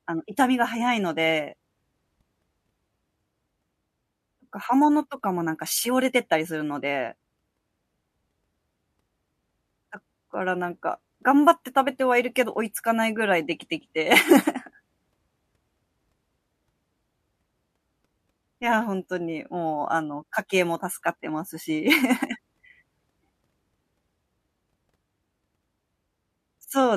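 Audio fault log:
No faults heard anywhere in this speech recording.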